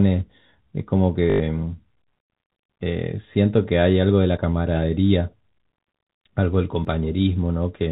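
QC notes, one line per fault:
1.3–1.4 s, packet loss with last packet repeated: a short robotic stutter that buzzes around 50 Hz. About 100 ms of audio was lost and covered by replaying the last packet, which points to 20 ms packets.
4.37 s and 6.85 s, audio missing between chunks: two abrupt skips about 2.5 s apart with no silence in between, likely from a brief piece dropped at each chunk boundary.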